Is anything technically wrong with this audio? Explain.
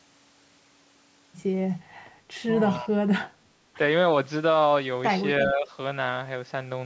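Yes, two related call faults occur twice each, both at the start of moments where both sides seem to be talking.

Echo leak: at 2.69 to 2.78 s and again at 5.41 to 5.45 s, a brief ghost of speech slips in, trailing the original by about 0.34 s. The first is faint, around 30 dB under the speech; the second is much more noticeable, roughly 15 dB down. This is likely a loudspeaker on one side whose echo canceller let part of the returned voice through and sent it back.

Speech suppressed in double talk: right after each leak, at 2.8 to 3.1 s and 5.47 to 5.67 s, the voice sags instead of continuing cleanly. The first dip is deep, about 25 dB across roughly 300 ms, so the speech nearly drops out. The second is milder, around 10 dB over about 200 ms. The same canceller likely could not tell its own talker from the echo while both were present, and so turned everything down together.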